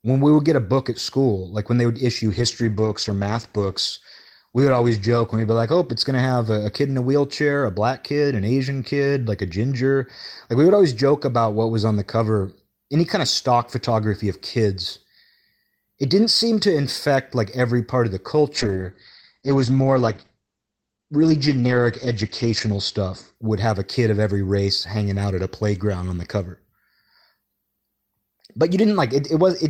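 A call bitrate drop hits at 2.33 s and lasts until 7.37 s, with the coarsest stretch lasting about 2.7 s. A second starts at 18.57 s and runs to 23.41 s, with its worst part lasting about 4.2 s. In both, the call's bandwidth estimate fell and the encoder cut its bit budget. The first sounds consistent with a fall from 32 kbps to around 13 kbps. The second, nearer 10 kbps, also cuts the audio off at 8 kHz. The sound turns rough and watery, and in the second also muffled, until the bitrate recovers.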